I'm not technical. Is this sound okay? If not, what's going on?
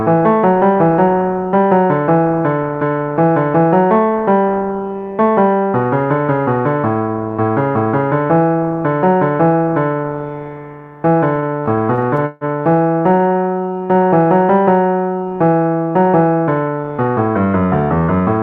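No, there's a rough patch in the middle. From 11.35 to 12.44 s you get repeated stalls (stutter): the sound kept arriving late, so playback ran dry 14 times and covered the gaps by stretching the last bit of sound, one pause lasting about 0.15 s. It happens again, lighter, from 12.93 to 13.38 s.

Right after, from 13.61 to 14.10 s, there's a jitter buffer slow-down: the player deliberately drags the audio to 84% speed, adding 86 ms, to rebuild a safety cushion. The pitch stays the same, but the sound feels stretched out.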